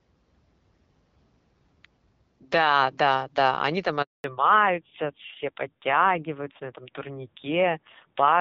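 Right after "да да они там", at 4.02 s, the speech drops out completely for 220 ms, until 4.24 s. That's a handover gap: the call got passed from one network to another, and no speech frames made it through during the switch. The sound fades away within a few tens of milliseconds and goes dead silent, and whatever was said in that window is simply gone. The link picks back up at 4.24 s.

When the audio returns, it's different. From 4.24 s through to the end you've got a fallback to narrowband. Before the gap, the light HD Voice coding sounds consistent with AMR-WB at around 12.65 kbit/s and has a fair bit of top end. After it, nothing comes through above 4 kHz, so the speech turns dull, boxy and a bit rough. It sounds like the call renegotiated onto the older narrowband codec during the handover, at a low rate that fits around 5.9 kbit/s, and never switched back.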